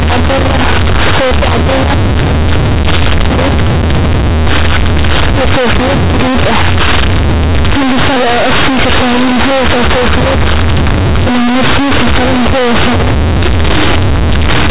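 From start to end the speech carries companded audio read as linear: mu-law bytes are played as raw 8-bit samples without expansion, so each sign change throws the output across half its range. Pauses roar with noise as loud as the talking, unlike plain clipping, which stays quiet between phrases. The telephone band still ends below 4 kHz.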